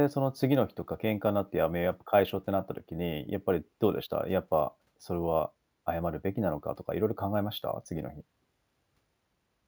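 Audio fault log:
Throughout, imaging from sample-and-hold upsampling: 16 kHz audio was stepped up to 48 kHz without smoothing. Mirrored spectra between 8 and 16 kHz add metallic fizz, about 24 dB down.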